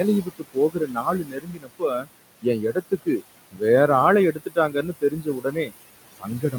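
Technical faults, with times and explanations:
Throughout: noise suppressor artifacts. The suppressor pulls steady-noise bands down by about 20 dB, so the background sinks between phrases and rises under the speech.
0.22–2.08 s, 2.42–3.22 s, 3.51–3.62 s, 4.32–5.72 s, 6.16–6.55 s: speech cut by the noise suppressor. Quiet speech was mistaken for noise and dropped by about 16 to 21 dB, leaving parts faint or swallowed, around the words "வேற ஆளை".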